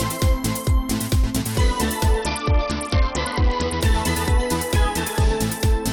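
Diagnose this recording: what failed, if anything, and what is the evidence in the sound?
From 2.22 s to 3.81 s the sound turns dull, its treble falling away, while a gritty, granular noise rises underneath; both clear once the stretch ends. This is a Bluetooth SBC bit pool drop at the codec stage. The sending device cut the bit pool to survive a congested link, which fits a fall from 31 to about 7, near 61 kbps, starving the upper sub-bands and coarsely quantising the rest until the rate recovered.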